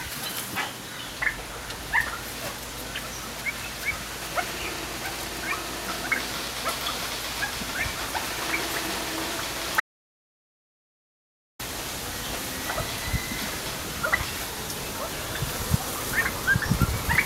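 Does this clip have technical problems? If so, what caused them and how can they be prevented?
Yes. From 9.80 s to 11.59 s the audio drops out to silence for about 1.8 s, with no room tone in the gap, likely because the input was lost while the recorder kept writing zeros. The waveform shows a flat line and the spectrogram a blank band. Secure cables and links, and monitor input levels while recording.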